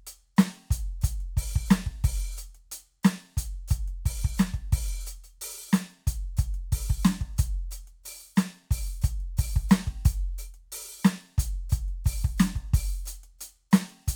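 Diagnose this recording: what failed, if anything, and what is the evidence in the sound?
No faults detected in this recording.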